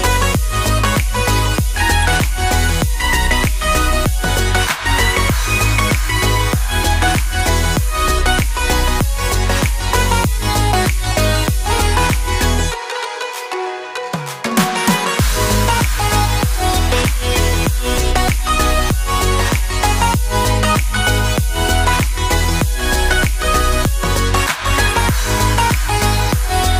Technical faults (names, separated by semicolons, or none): none